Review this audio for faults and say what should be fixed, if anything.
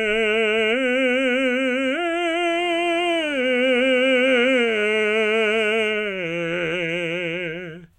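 From 2.49 s to 5.68 s a hard, raspy buzz sits under the music, nearly steady and about 27 dB below it, with a 217 Hz fundamental and a dense stack of harmonics unrelated to anything played. This is GSM phone buzz: a nearby 2G phone on a call transmits radio bursts 217 times a second, and the audio circuitry rectifies those pulses into an audible buzz. Keep phones away from the recording chain or switch them to flight mode.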